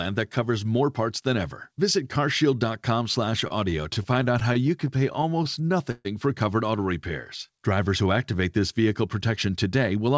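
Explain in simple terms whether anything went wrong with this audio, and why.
A couple of things went wrong here. From 3.3 to 6.07 s, just before "for covered auto repairs", there's a stutter from repeated stalls: packets kept arriving late, so the receiver ran dry about two dozen times and stretched out the last sound, the longest patch being 134 ms. Nothing's actually lost, but it drags and hiccups.

Then from 7.47 to 8.61 s, between "for covered auto repairs" and "vehicle protection", there's a jitter buffer slow-down. The receiver was topping up its reserve by repeating tiny slices of sound, so that stretch plays at about 91% speed, adding 114 ms. The pitch stays put, but it sounds drawn out.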